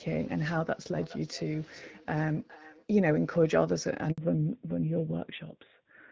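From 0.98 to 2.90 s there is feedback echo between two devices: a second device replays the sound, which returns roughly every 400 ms at about −20 dB. On a spectrogram it shows as faint, evenly spaced copies of each burst.

At 4.12 s a 60 ms handover gap opens while the call switches networks. The waveform flattens to silence, and a clean vertical blank cuts through the spectrogram.

From 4.18 s the call falls back to narrowband, consistent with a drop from AMR-WB to AMR-NB. Everything above 4 kHz vanishes and the sound turns dull and rough, leaving a sharp horizontal ceiling on the spectrogram.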